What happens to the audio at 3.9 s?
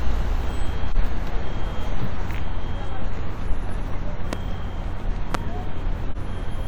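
Compressed frames are skipped from 3.88 to 3.96 s: the decoder drops whole frames, so the sound jumps ahead by about a tenth of a second. The join is seen as an abrupt seam in the spectrogram and waveform.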